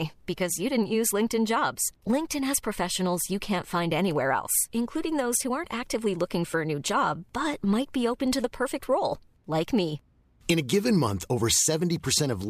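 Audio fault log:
There is no fault in the speech audio.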